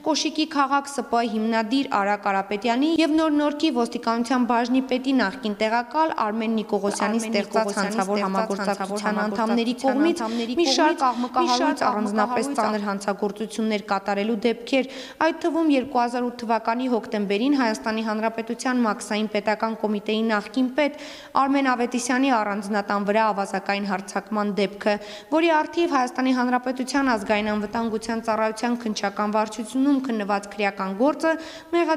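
From 6.88 s to 12.74 s the audio carries a doubled audio track: a second full-band copy trails by about 0.7 s, roughly 5 dB quieter, likely from a slower capture path. Unlike an echo, it has no decay or room colour and starts and stops abruptly.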